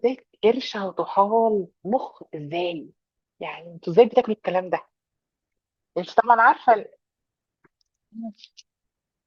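Speech with compressed frames skipped at 0.43 s and 4.21 s: each time roughly one 20 ms frame is missing, so the sound jumps ahead. On a spectrogram each shows as a narrow vertical discontinuity, with no gap.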